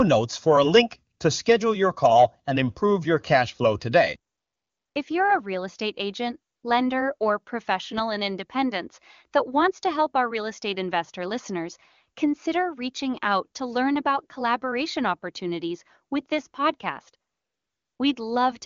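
Speech clip where the phone's voice activity detection decided the talker had gone quiet and stopped sending speech frames, so the receiver filled those gaps with AMR comfort noise built from a rough level-and-spectrum description. This happens at 1.17 to 1.19 s, 4.31 to 4.95 s, 6.53 to 6.63 s and 17.31 to 17.99 s. In each gap the real background gives way to a smooth, steady synthetic hiss that switches in and out, and quiet sounds at the edges can be clipped. The speech itself carries the clean wideband character of AMR-WB, which fits its highest rate.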